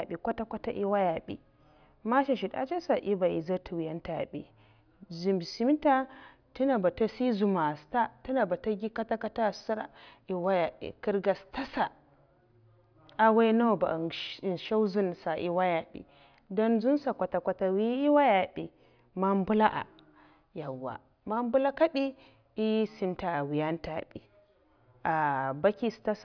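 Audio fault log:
No faults are audible anywhere in this speech.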